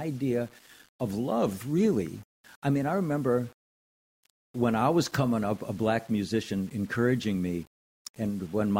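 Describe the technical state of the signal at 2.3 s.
At 2.3 s the speech carries a grainy, gritty distortion that clings to the signal, sitting around 30 dB below it and growing rougher as the level drops, as it does across the whole clip. This is likely low bit depth without dither, with a coarseness that fits rounding to about 7 bits. Because no dither was added, the rounding error tracks the waveform instead of spreading into smooth noise, so quiet detail turns into distortion.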